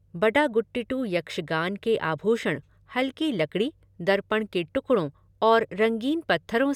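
Listening to the speech here, nothing stood out as a technical problem at any point.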